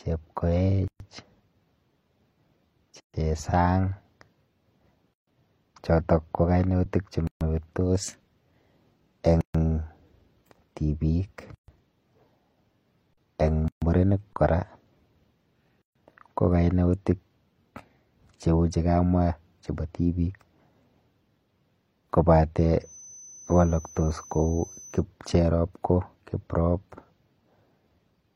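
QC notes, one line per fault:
0.88, 3.00, 5.14, 7.27, 9.41, 11.55, 13.68 and 15.82 s: gap at a join of encoded pieces. The speech was encoded in separate segments and joined without trimming, so each encoder's start-up delay and padded final frame remain at the seams. The result is a dropout of about 123 ms at the first join and about 136 ms at each later one. The edges are smeared by the codec, and the speech picks up exactly where it broke off.
13.13 s (40 ms) and 14.33 s (30 ms): underrun with held sample. The output buffer ran dry, and the converter froze on its last sample value until new data arrived. The waveform flattens at a non-zero level, so the speech stops without a sharp click. Because no live audio was discarded during the stall, playback resumes from the same point and the restart is soft rather than clicky.
22.77–25.04 s: feedback whistle. A thin, steady tone near 6.1 kHz sits about 25 dB below the speech and swells and fades slowly in level. 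This is likely a loudspeaker-to-microphone loop held right at the edge of feedback, sustaining that single frequency without running away. The tone stays in the background rather than building up, which is why it comes across as a faint persistent whistle.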